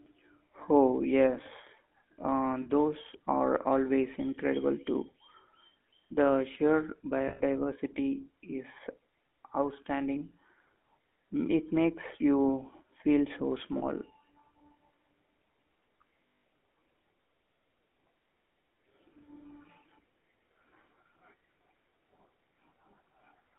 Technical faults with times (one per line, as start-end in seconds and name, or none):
0.00-23.59 GSM full-rate codec
2.62-2.67 lost GSM frames
7.28-7.41 lost GSM frames
13.78-13.83 lost GSM frames
16.29-16.44 lost GSM frames